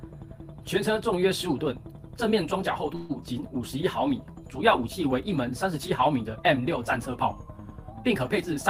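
At 2.95 s the sound stops moving forward and the last moment is drawn out as a fading buzz for about 142 ms, until 3.13 s. Then the audio resumes from exactly where it halted, with nothing lost but everything after it running late. This is a call audio freeze, likely caused by packets stalling in transit until the jitter buffer emptied. On a spectrogram the stretch appears as smeared, static horizontal bands that thin out. The waveform shows a repeating, decaying pattern instead of silence.

From 7.09 s to 7.91 s the audio slows by 5.42% and drops in pitch by about 97 cents, close to a semitone, then snaps back to normal speed and pitch. This is a drift correction step, likely from clock-matching software abruptly changing the playback rate to rebalance its buffer. On a spectrogram every harmonic line steps down together for that span and jumps back up at the end. The waveform looks slightly stretched in time over the same interval.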